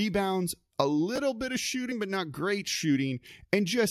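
At 1.16 to 1.18 s there is a brief jumbled moment: chunks out of order. A piece of about 5.33 ms arrives three chunks late and plays after its successors. Nothing is missing, unlike a dropout, but there are three hard joins.

At 1.91 s a short glitch marks damaged data in a compressed stream. The decoder misreads the corrupted frame, loses sync and skips ahead to the next header. Unlike the reordering, the sound here is garbled codec output, not intact audio in the wrong order.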